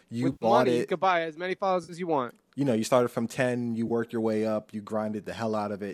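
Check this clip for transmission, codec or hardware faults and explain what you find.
AAC frame loss with concealment occurs three times in this speech. The gaps are at 0.32–0.45 s after "you with", 1.84–1.93 s between "could buy as many" and "you want", and 3.88–3.91 s before "your way up you". They last about 90, 50 and 20 ms. The decoder rebuilt each gap from the last good spectrum. Each patch sounds briefly smeared and noisy. The stream is likely low-delay AAC.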